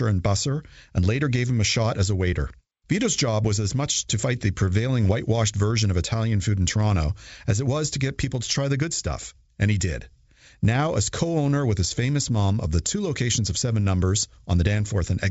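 No technical faults can be heard in this speech, which comes through G.722 wideband telephone coding at 64 kbit/s.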